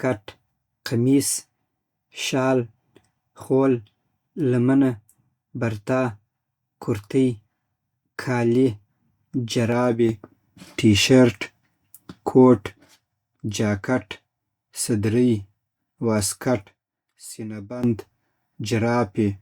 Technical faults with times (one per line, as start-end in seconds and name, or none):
10.09-12.67 sudden gain jump
16.66-17.83 sudden gain jump